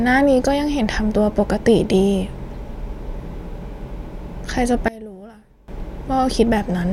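From 4.88 to 5.68 s the speech drops by about 22 dB to a faint copy, likely from one channel inverted cancelling the centred voice in mono.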